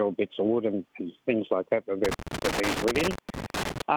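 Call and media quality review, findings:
Loose connector crackle, 2.05 to 3.82 s. Irregular bursts of scratchy crackle lasting nearly two seconds. Probable culprit: a worn or dirty contact in a plug or jack. Contact keeps making and breaking as it shifts, chopping the signal, with pops where DC on the line jumps. Reseat or swap the cable first.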